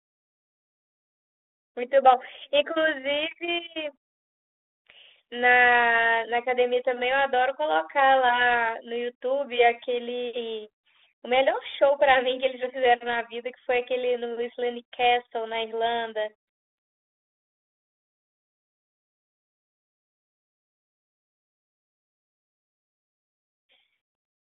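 Nothing stood out on listening to this speech, which comes over the telephone-band G.726 link at 32 kbit/s.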